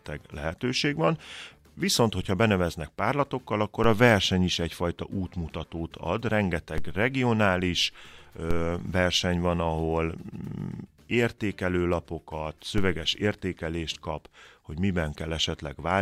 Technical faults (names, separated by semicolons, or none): DC step